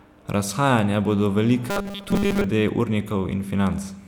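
From 1.70 s to 2.46 s the speech turns into robotic sound from repeated short buffers: a rigid, metallic 200 Hz buzz. The likely cause is starved playback looping the last 5 ms chunk, skipping most of the real audio in that stretch.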